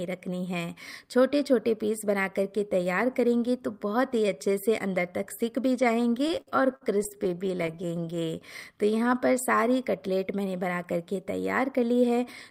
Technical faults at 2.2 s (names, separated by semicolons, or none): none